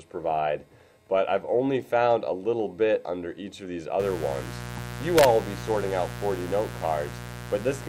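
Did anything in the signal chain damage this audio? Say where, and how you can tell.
Yes. Mains buzz enters at 4.00 s and runs to the end of the clip at about 7.89 s. It is a raspy buzz sitting roughly 10 dB below the wanted sound, which points to the analogue wiring stage. It is built on a 60 Hz fundamental with harmonics stacked up into the kilohertz range. That spectrum comes from sharp switching spikes, twice per mains cycle, leaking in through a dimmer, a rectifier or an unshielded run before the converter.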